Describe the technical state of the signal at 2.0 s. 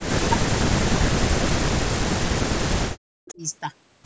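At 2.0 s the speech sits inside a stretch of speech suppressed in double talk, running from the start to 3.42 s. The level repeatedly dips and breaks into fragments, at worst by about 40 dB, over roughly three seconds in total. The likely cause is an echo canceller mistaking the talker for loudspeaker echo while both sides spoke, and pulling both down. On a waveform the envelope shows gouged, gappy sections. A spectrogram shows the energy thinning or vanishing in patches below the 8 kHz ceiling.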